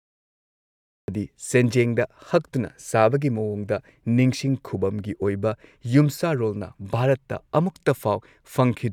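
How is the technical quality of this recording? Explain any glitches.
The recording has one clear technical fault, at the very beginning.

Cut-off start, from 0.00 to 1.08 s: the capture began late, so the first second or so is digital silence and the speech then arrives abruptly at 1.08 s, already in mid-sound. Because recording started partway through an utterance rather than before it, there is no natural onset or fade-in. The opening is truncated, and the audio jumps from dead silence straight into ongoing speech.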